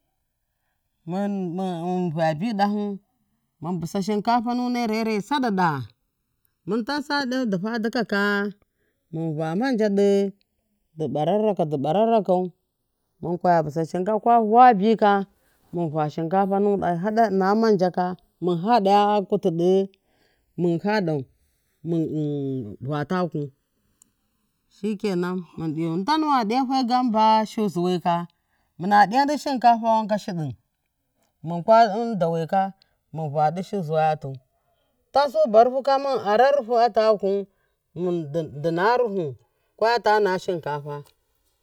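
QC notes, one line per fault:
Throughout, channels drifting apart: the two channels run on clocks roughly 70 ppm apart, so their offset creeps up to about 2 ms by the end. Summed to mono, comb notches glide slowly through the speech, a gradual flanging sweep rather than a fixed, static comb coloration.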